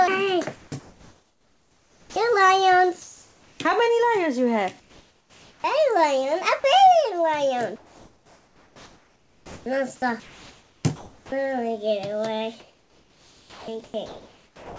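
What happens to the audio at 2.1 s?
At 2.1 s the sound is chopped, with real audio dropping out and comfort noise filling the gaps. This runs from 0.56 s to the end. It is likely sound chopped by the voice detector, with about 7.8 s swapped for comfort noise.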